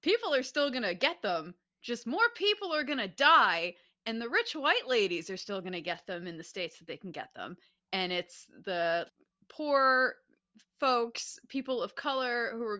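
No technical faults are audible.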